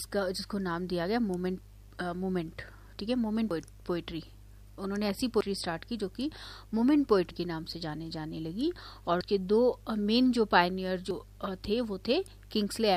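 Five abrupt skips interrupt the sound at 3.51, 5.41, 7.31, 9.21 and 11.11 s, each a sudden jump forward where about a tenth of a second of material vanishes and the two sides butt together with no gap of silence. The regular 1.9 s spacing points to audio missing between chunks. The recording was likely handled in 2-second chunks, and a short piece was lost each time one chunk closed and the next opened.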